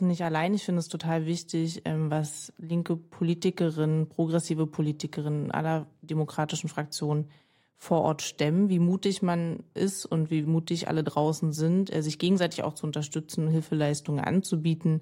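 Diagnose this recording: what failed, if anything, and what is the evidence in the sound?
No failure is audible at any stage of the chain in this speech recording.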